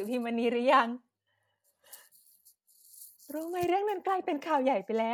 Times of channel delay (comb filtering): 3.62-5.13

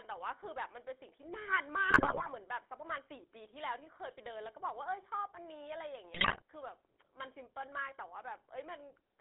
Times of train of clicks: none

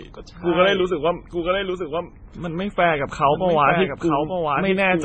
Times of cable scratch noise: none

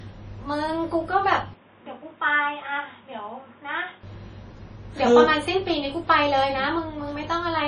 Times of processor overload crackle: none

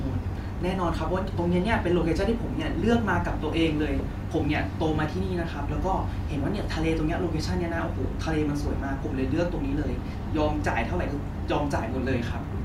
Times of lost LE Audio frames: 10.13

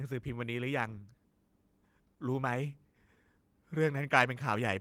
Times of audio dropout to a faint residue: none

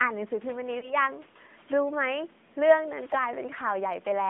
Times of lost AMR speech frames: 0.80-0.94

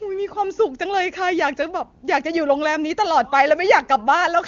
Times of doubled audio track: none

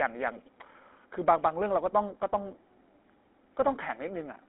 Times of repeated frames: none

